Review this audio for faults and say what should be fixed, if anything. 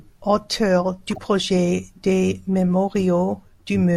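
A corrupt frame decoded fault runs from 1.07 to 1.18 s, just before "projet des". Damaged frames were played as valid, putting a chirpy burst, peaking around -20 dBFS, at wrong frequencies: a misplaced bright smear spanning a few frames on a spectrogram. Checksum-based frame concealment would prevent it.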